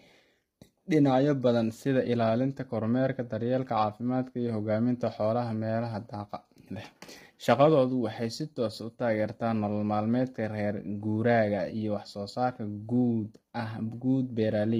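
A speech clip with low-delay AAC compression throughout. The voice sounds rough and grainy, with noise filling the gaps between pitch harmonics, likely from AAC-ELD's short frames at a heavy setting that fits about 24 kbps. Standard AAC would instead smear transients with pre-echo.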